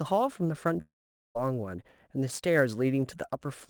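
Sample clock jitter runs throughout: timing errors of a few microseconds add a hiss roughly 30 dB below the speech, rising with loud, bright sounds and showing as broadband haze on a spectrogram.

From 0.81 to 1.37 s the speech breaks off. A brief fading buzz holds the last sound, then about 0.44 s of near-silence appears as a blank gap. This is likely a long network dropout that lost about 0.54 s.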